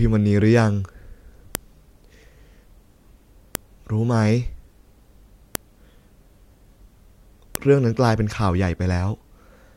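File header played as audio at 1.55, 3.55, 5.55 and 7.55 s: leftover WAV headers between 2-second speech pieces play as samples, giving a sharp, loud click each time.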